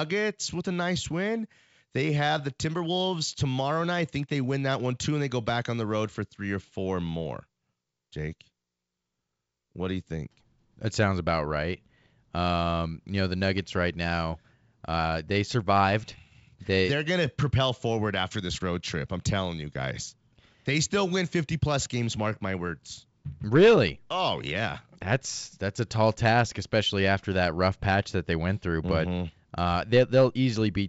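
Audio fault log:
No faults heard.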